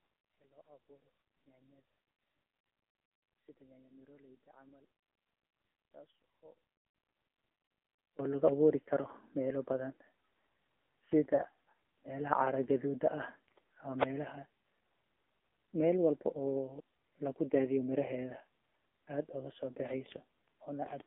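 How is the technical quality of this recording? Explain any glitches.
Quality is pretty rough: the whole clip has narrowband mobile codec damage, the first stretch nearly cancels out, and there are two short dropouts.

The AMR narrowband mobile codec runs throughout. The line only carries roughly 250 Hz to 3.6 kHz, so the speech is thin and muffled. The sparse pulse-driven vocal tract model gives it a plainly audible buzzy, synthetic edge, which points to a low mode around 7.4 kbps.

From 0 to 8.19 s the level sits about 27 dB down and faint. That's likely one channel inverted: with reversed polarity, whatever the two channels share cancels when they're summed to mono, leaving only the small difference between them.

There are lost AMR speech frames at 8.84–8.89 s, just before "meela bathan", and again at 11.36–11.43 s. Each is a brief dip or warble where the decoder fills the gap by reusing the previous pitch and vocal tract settings at falling gain. 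That fits a single 20 ms frame lost each time.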